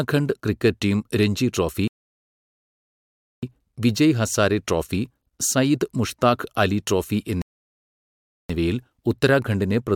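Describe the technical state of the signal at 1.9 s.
At 1.9 s the speech has just dropped into a rebuffering stall, running from 1.88 to 3.43 s. The player exhausted its downloaded audio and paused, giving flat silence, then resumes exactly where it stopped. Nothing is skipped, but 1.55 s is added.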